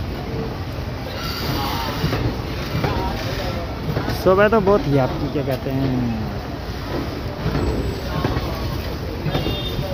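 At 0.73 s and again at 2.47 s a bit error spike gives a lone sharp tick, peaking near about -22 dBFS and then about -28 dBFS. A single corrupted sample jumps by a power of two, showing as a one-sample needle on the waveform and a thin full-height vertical line on a spectrogram.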